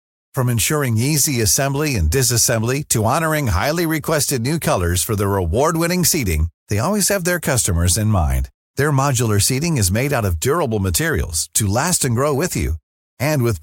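No technical faults are audible.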